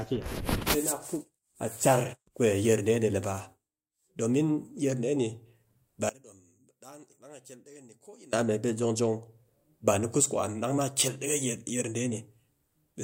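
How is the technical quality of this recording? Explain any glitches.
One glitch stands out in the recording. From 6.09 to 8.33 s, the speech drops by about 23 dB and turns faint. The centre of the sound nearly disappears. The likely cause is one channel inverted. When one stereo side has flipped polarity, the material shared by both sides cancels on a mono sum. Only the small difference between them remains. That leftover is the weak copy heard here, until full level returns at 8.33 s.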